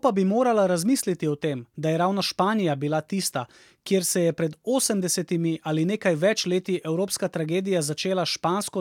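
Nothing in the recording stood out as a technical fault on listening.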